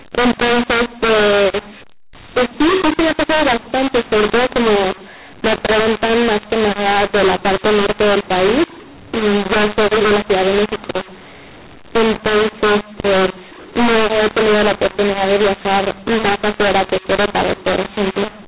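Throughout, mu-law and A-law are mixed up: mu-law samples decoded as A-law scramble levels, so speech sounds harsh and pauses show a noisy, never-flat waveform.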